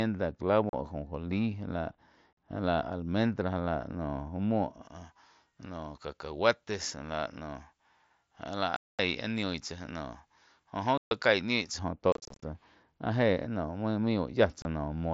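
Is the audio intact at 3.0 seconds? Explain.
Yes, the speech at 3.0 seconds is intact, with no fault at that moment.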